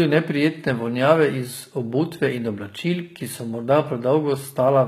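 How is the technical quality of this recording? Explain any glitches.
The recording has plainly audible codec damage throughout the speech, most likely HE-AAC compression. Across the whole clip, s sounds come out gritty and metallic, with nothing above 14.9 kHz. Only the lower spectrum is truly coded, and the treble is rebuilt by copying lower bands upward, which fits a low bitrate near 20 kbps. Unlike an ordinary low-bitrate codec that simply dulls the top end, the treble stays bright but its harmonics don't line up.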